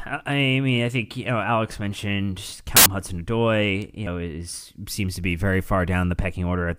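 A corrupt FLAC frame between 2.5 and 2.86 s in this speech recording produces an error peaking at about -4 dBFS. Flipped bits sent the decoder's prediction off track, and the damage runs across what sounds like several consecutive frames before clean audio returns. Compressed frames were skipped from 4.07 to 4.16 s: roughly a tenth of a second of speech is simply missing. Because lossless frames do not overlap, the jump forward comes across as a hard click rather than a smeared blip.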